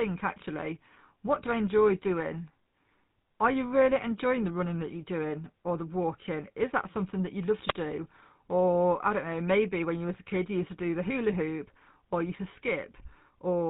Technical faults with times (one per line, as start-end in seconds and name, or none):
0.00-13.70 GSM full-rate codec
7.68-7.73 wireless microphone squelch dropout